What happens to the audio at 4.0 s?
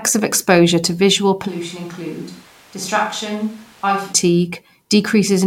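At 4.0 s you're still hearing a switch to a distant microphone, running from 1.49 s to 4.12 s. The close mic likely dropped out, leaving a far pickup, so the speech goes hollow and roomy, thinner in the bass, roughly 10 dB quieter, with audible room noise, before snapping back.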